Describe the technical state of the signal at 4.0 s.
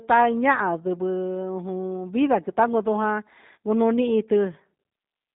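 At 4.0 s the speech carries G.729 codec damage, present throughout the clip. The sound is rebuilt from a vocal tract filter, pitch prediction and sparse pulses, consistent with an 8 kbit/s coder. The band is held to about 150 Hz to 3.7 kHz, and the speech sounds plainly rough and synthetic.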